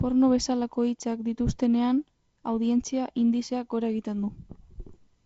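Nothing stood out on listening to this speech clip.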